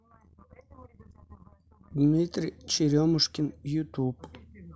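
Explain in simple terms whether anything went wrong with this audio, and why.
At 2.76 s the playback device ran short of fresh audio for a moment and played its last buffer once more, a repeated buffer. That piece lasts only about 4 ms, which fits a 64-sample buffer, so the repeat comes across as a tiny click.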